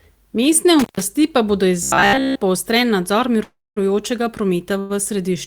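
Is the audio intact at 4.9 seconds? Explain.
No. A call audio freeze spans 4.79 to 4.92 s, likely from delayed packets emptying the jitter buffer: the last sound smears into a fading 0.1 s buzz or hiss, showing as flat stretched spectrogram bands, then resumes 102 ms late with nothing lost.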